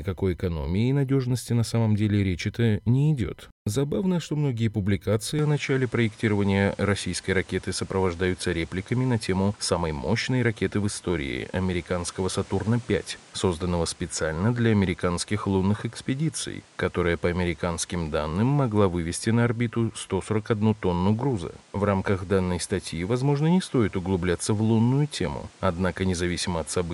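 At 5.39 s, just after "что многие публикации", the speech abruptly loses its top end. From there to the end, nothing above about 11.1 kHz remains. A new background noise also appears, roughly 30 dB below the speech. The loudness stays much the same, and there is no gap at the change. The sound is simply duller and a little noisier. This is likely an input switched to a poorer device, with a narrower band and its own noise.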